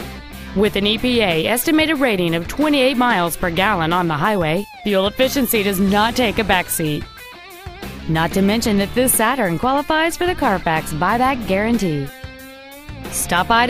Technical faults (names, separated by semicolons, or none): mains buzz